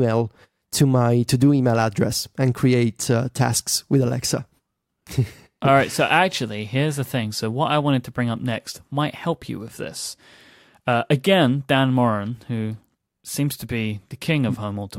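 No technical faults can be heard anywhere in the speech.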